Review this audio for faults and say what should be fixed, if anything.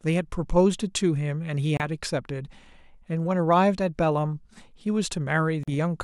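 The speech drops to silence at 1.77–1.83 s and again at 5.63–5.70 s, gaps of about 60–70 ms. Each is a Bluetooth dropout, likely late wireless packets discarded before playback. The waveform shows flat holes, and the spectrogram shows clean vertical blank bands. Keep the wireless link short and free of interference, or use a larger playback buffer.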